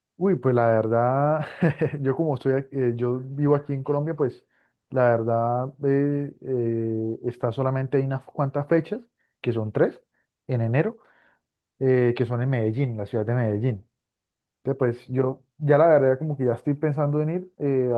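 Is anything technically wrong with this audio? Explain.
No, nothing in this speech is technically wrong.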